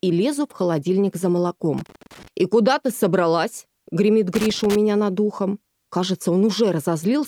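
Loose connector crackle breaks out from 1.78 to 2.28 s and again from 4.35 to 4.76 s: irregular scratchy bursts where a worn contact intermittently interrupts the signal.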